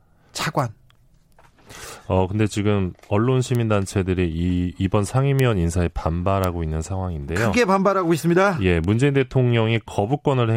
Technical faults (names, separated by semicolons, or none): bit error spike